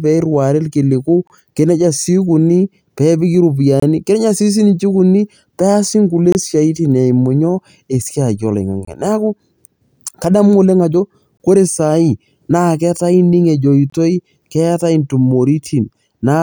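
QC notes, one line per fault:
1.27, 3.80, 6.32, 8.85, 11.37, 13.90 s: gap between chunks. 25 ms silences recur every 2.5 s, each one interrupting the speech at a chunk join.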